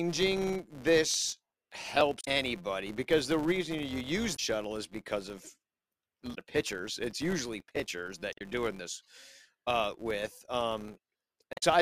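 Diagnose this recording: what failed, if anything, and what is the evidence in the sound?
A processing filter is losing its state at every block boundary and restarting from silence, a fault in the call-processing or effects stage. Each block therefore opens with a small transient. Across the whole clip this produces a steady buzz at 172 Hz, which fits a 256-sample block. The buzz rises and falls with the speech level because each transient scales with the signal entering the filter.

The processor, at the driver or buffer stage, could not keep up with its small audio buffers and missed its deadlines repeatedly in two stretches: 1.11 to 2.01 s, and 7.60 to 7.90 s. The crackle points to buffers of about 5 ms. Each miss replayed a piece of old audio with hard edges. The first stretch holds a few dozen such misses and the second around fifteen, heard as gritty processor overload crackle riding on the speech until the load eases.

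Damaged data in the compressed stream forced the decoder to misread or reject frames and resynchronise at the codec stage. There are five short disturbances, each a chirp, squawk, click or brief hole: at 2.21 to 2.28 s, 4.33 to 4.40 s, 6.31 to 6.38 s, 8.30 to 8.41 s and 11.53 to 11.63 s. Each lasts roughly 70 to 110 ms, which fits the decoder losing sync and then finding the next valid frame header.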